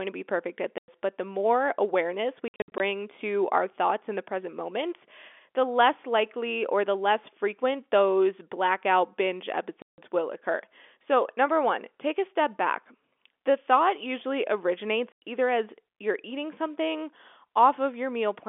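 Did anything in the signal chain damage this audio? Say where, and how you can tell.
Yes. The damage happened on the network, as packet loss filled with silence. The speech drops to dead silence with hard edges at 0.78 to 0.88 s, after "to be perfect at". It happens again at 9.82 to 9.98 s and at 15.12 to 15.22 s, before "either as you're eating". From 2.48 to 2.8 s, before "to our thoughts in", 200 ms is lost in short gaps of up to 60 ms. The gap lengths fit 20 ms packets. The receiver inserted silence instead of concealing them. The G.711 telephone band underneath is intact.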